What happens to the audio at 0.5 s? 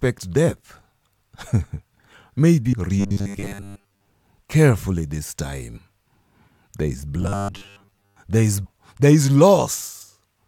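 Nothing goes wrong at 0.5 s; the audio plays through that moment intact, with no dropout, click or distortion.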